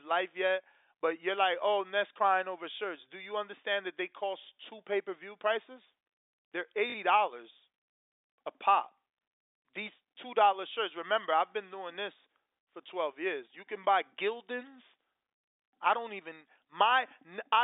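At 6.90 s the speech catches in a brief robotic stutter lasting about 40 ms, with a buzzy, repeated texture until normal sound resumes at 6.94 s. This is packet loss with the last packet repeated. Audio went missing, and the receiver filled the gap by replaying its most recent packet rather than leaving silence. The 40 ms gap fits two 20 ms packets being lost. Around it, the telephone-band G.711 sound stays within roughly 300 Hz to 3.7 kHz.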